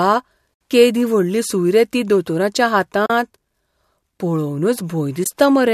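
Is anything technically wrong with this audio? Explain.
Yes. The clip shows AAC frame loss with muting: compressed frames went missing and the decoder zeroed their spectrum, so the overlapping windows fade the speech out and back in. Soft-edged silent holes appear at 0.54 s (70 ms), 3.06 s just after "सूय रे ती दोतोराच्या" (40 ms), and 5.24 s (20 ms).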